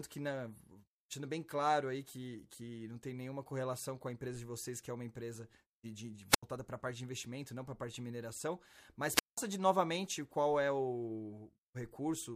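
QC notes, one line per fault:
6.29–6.43 s: wireless microphone squelch dropout after "uma empresa de de". The radio link fades, hiss swells briefly, then the receiver's squelch mutes the output for about 82 ms before speech resumes at "para a parte de".
9.14–9.38 s: wireless microphone squelch dropout after "parte de mineração mas". Another fade triggers a brief static rise, then a longer squelch mute of about 186 ms, leaving a near-silent gap until "de novamente qual é".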